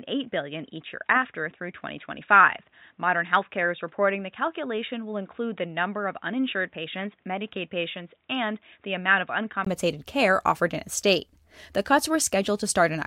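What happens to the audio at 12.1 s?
Nothing goes wrong at 12.1 s; the speech carries on intact through that moment.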